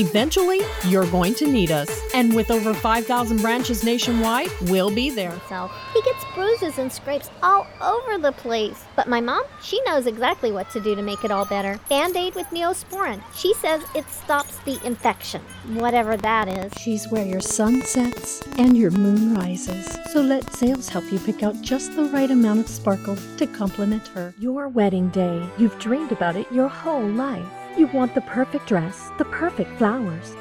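From 15.80 s to 20.89 s a train of clicks sits over the sound: about 9.4 sharp ticks per second at an uneven pace, roughly fifty in all, each alike in shape and peaking around 10 dB above the surrounding audio. The cause is likely interference from nearby equipment or a faulty connection or power supply. On a waveform they appear as thin, isolated spikes. On a spectrogram they show as narrow vertical streaks spanning the full band, irregularly spaced.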